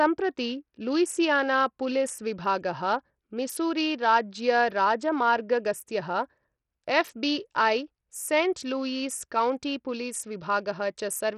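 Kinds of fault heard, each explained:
Bluetooth SBC compression: The speech carries heavy codec damage throughout, likely from the SBC Bluetooth codec at a low rate that fits about 64 kbps. SBC splits the sound into a few wide bands and shares out bits with no model of hearing. At this rate the upper bands starve. Nothing is left above 14.5 kHz, so the treble sounds dull and unsteady. A gritty, grainy noise rides on the remaining sound.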